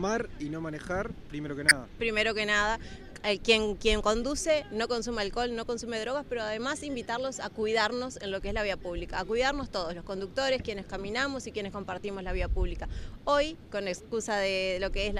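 At 1.68 s, running to 1.73 s, there's a short, harsh blip, the classic sound of a corrupt frame decoded. Some bits in the compressed stream got flipped, and the decoder played the damaged data anyway, so misread gains and codes dumped energy into the wrong frequencies for a few frames' worth of time, about 50 ms. It comes across as a sudden squeaky burst that's really loud, peaking somewhere around -5 dBFS.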